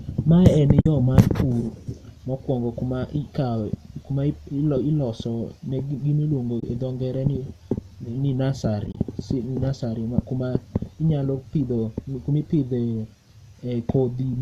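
At 0.81 s, a 50 ms gap opens just before "yo mar". This is AAC frame loss with muting. Lost frames are decoded as silence, and the overlapping windows fade the sound down and back up, leaving a soft hole. The gap's length fits about five short frames. At 6.60 s, right after "ne gimiluongo", a 30 ms hole follows. From 8.87 to 8.97 s, 60 ms goes missing in scattered pieces, none longer than about 30 ms, so the sound flutters briefly. The speech carries slight graininess, likely from low-delay AAC compression at a fairly generous bitrate.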